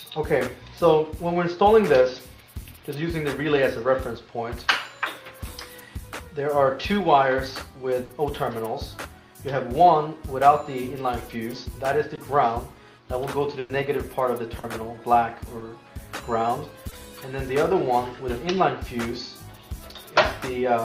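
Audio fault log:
8.03–8.11 s and 13.59–13.71 s, burst of packet loss: a run of packets went missing, about 60 ms the first time and about 100 ms the second. The receiver kept extending the last bit of sound and faded it as it went, which is why you get a held buzzy or hissy smear instead of a dropout. Then the audio picks up further along, with that stretch simply gone. The second one never drops to silence.
12.15–12.19 s, 14.59–14.65 s, 15.59–15.63 s and 16.89–16.93 s, short concealed packet loss: tiny gaps, about 20 ms each except the 40 ms one at 14.59 s, where data arrived too late for the decoder. It patched each hole by carrying the preceding sound forward and blending back into the real signal, so what you catch is a quick smear or little wobble, and a short transient can vanish.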